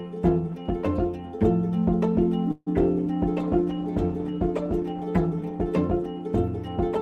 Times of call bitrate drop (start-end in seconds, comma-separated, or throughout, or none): 3.36-5.63